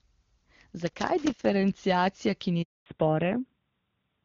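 From 0.87 to 1.45 s, loose connector crackle breaks into the speech: a worn or dirty contact keeps making and breaking, so the signal is chopped into fragments and any DC on the line adds pops. It sounds like irregular scratchy crackling. On a waveform the envelope is broken by jagged gaps and sharp spikes. A spectrogram shows scattered vertical broadband streaks across those 0.59 seconds.

At 2.62 s a handover gap begins as the call switches from one network to another and no speech frames arrive for 240 ms. The sound fades within a few tens of milliseconds and then stays silent until 2.86 s, and whatever was said in that span is gone. The waveform flattens to a line. The spectrogram shows a blank vertical band covering every frequency.

From 2.86 s to the end, the call falls back to narrowband. Up to the gap, the wideband HD Voice sound carries energy up to around 7 kHz. After it, nothing remains above 4 kHz, which fits a switch from AMR-WB to narrowband AMR. 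The speech becomes duller and rougher, losing crisp sibilants. On a spectrogram the upper region is cut off by a hard horizontal ceiling at 4 kHz.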